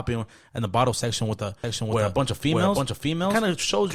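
A slower second path or misaligned edit likely added a doubled audio track from 1.64 s: an equally loud copy trails about 0.7 s behind.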